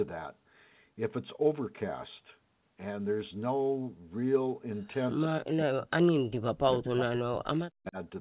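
From 5.27 to 5.84 s the speech drops by as much as about 40 dB. This is likely speech suppressed in double talk: with both ends talking at once, the echo canceller could not tell the local talker from loudspeaker echo and turned everything down. From 6.07 to 6.12 s a brief, faint copy of the voice comes back about 20 dB below the speech and 161 ms late. This is likely an echo leak, where the loudspeaker side's canceller let part of its microphone pickup through. The suppression returns from 6.40 to 6.61 s and again from 6.77 to 7.98 s, likely from the same double-talk cause, with the sound again dipping by up to about 40 dB. Throughout, the sound is band-limited to 4 kHz, which fits the narrowband G.711 codec on the call path.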